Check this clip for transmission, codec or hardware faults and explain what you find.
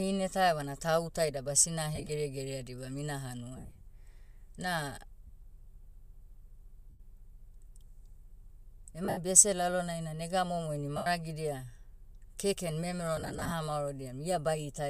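Lost LE Audio frames occur seven times: 1.95–2.09 s (after "tau ta ida basina", before "dibam ina"), 3.57–3.81 s, 5.27–5.30 s, 6.90–7.00 s, 9.05–9.18 s, 10.97–11.07 s (after "na nega momo ini") and 13.17–13.52 s (after "keken memero"). When radio frames drop, the decoder repeats the last spectrum with scrambled signs and fades it. The speech smears into a brief noisy hiss. The longest losses, around 50–70 ms at 3.6 s and 9.1 s, sag toward quiet. A faint grain throughout is likely from normal LC3 compression.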